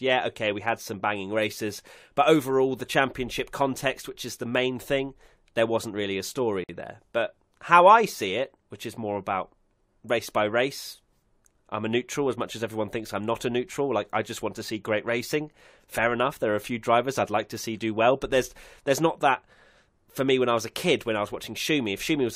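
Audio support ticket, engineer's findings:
Gap at a join of encoded pieces, 6.64–6.69 s: 51 ms gap, smeared edges; unmerged encoder delay and padding. Speech resumes exactly where it stopped, unlike dropout, where content is lost.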